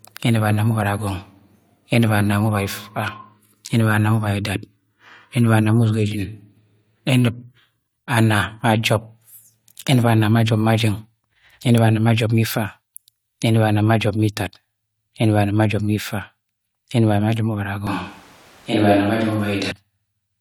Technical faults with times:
17.87-19.71 switch to a distant microphone

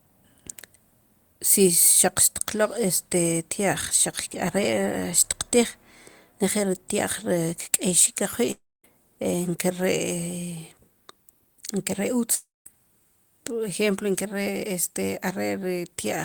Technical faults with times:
8.51-8.85 long network dropout
12.35-12.67 long network dropout

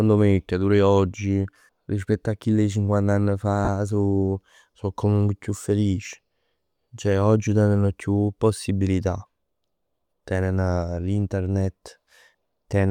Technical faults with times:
3.65-3.68 lost LE Audio frames

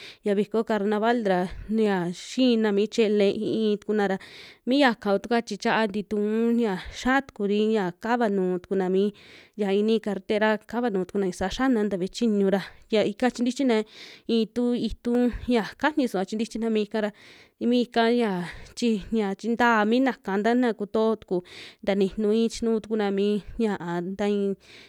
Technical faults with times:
1.86 dropped samples
15.15 dropped samples

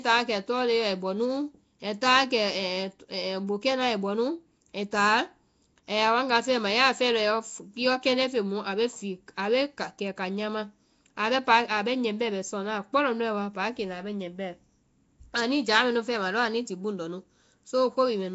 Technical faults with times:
0.00-18.35 Nellymoser compression

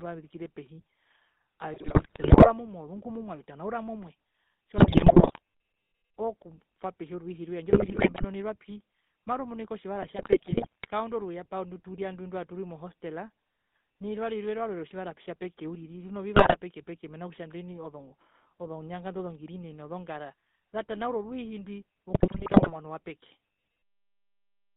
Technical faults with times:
0.00-24.76 GSM full-rate codec
1.74-2.51 GSM bit errors
4.78-5.39 GSM bit errors
7.70-8.25 GSM bit errors
10.02-10.90 GSM bit errors
16.36-16.58 GSM bit errors
22.12-22.73 GSM bit errors

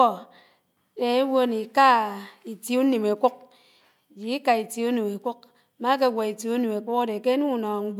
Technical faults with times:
none

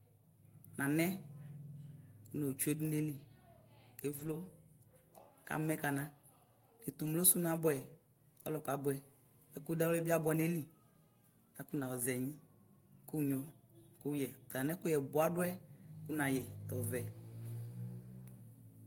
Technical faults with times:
4.11-4.33 lost packet rebuilt from error correction
7.01-7.07 lost packet rebuilt from error correction
11.75-11.85 lost packet rebuilt from error correction
14.67 lost packet rebuilt from error correction
16.37-16.43 lost packet rebuilt from error correction

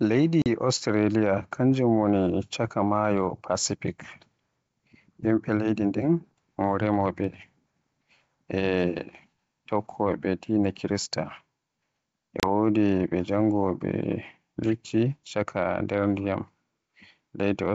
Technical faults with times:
0.42-0.47 packet loss on an ADPCM call
12.40-12.46 packet loss on an ADPCM call

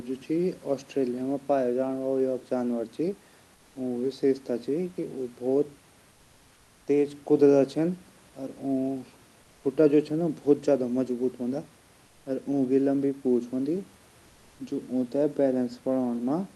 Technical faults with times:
6.11-6.87 comfort noise in place of the background

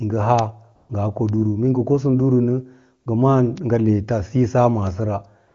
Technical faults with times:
0.39 bit error spike
0.75-0.89 AMR comfort noise
1.29 bit error spike
3.03-3.05 AMR comfort noise
3.58 bit error spike
4.87 bit error spike
5.47-5.54 AMR comfort noise

